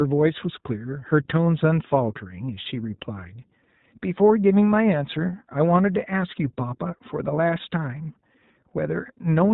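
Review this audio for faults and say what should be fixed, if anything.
The iLBC codec is audible throughout the clip: the speech is band-limited to 4 kHz, leaving it dull, and has a plainly rough, synthetic texture. Each short frame's excitation is coded independently, and the character fits 20 ms frames at about 15.2 kbps. To prevent it, record or transmit through a wideband codec such as Opus, or uncompressed PCM, instead of iLBC.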